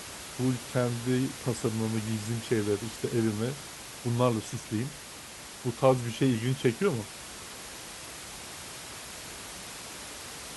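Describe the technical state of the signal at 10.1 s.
At 10.1 s the speech signal is intact, with only the room's own background noise present at about 13 dB below the speech.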